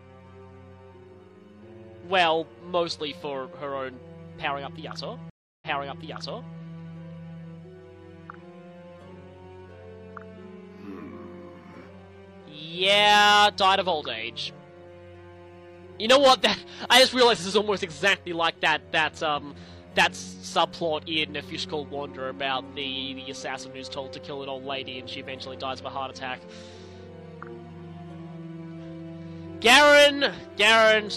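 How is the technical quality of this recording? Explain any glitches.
The recording has one clear glitch, a stream reconnect between about 5.30 and 6.55 s. The connection dropped, so playback fell silent for roughly 0.32 s while the player reconnected and started a new decoder partway through the stream. When the audio returns, it picks up about 0.93 s earlier than where it broke off. The server resent a burst of data from before the dropout, so you hear nearly a second of material repeated right after the gap.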